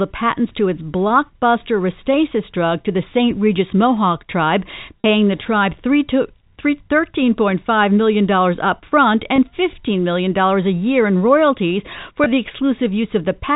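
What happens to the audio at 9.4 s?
Around 9.36 to 9.38 s, about 20 ms of audio was lost in transmission, which fits a single dropped packet, and the receiver concealed it with packet loss with pitch repetition, replaying the last pitch period. The gap comes out as a brief, slightly held, buzzy tone.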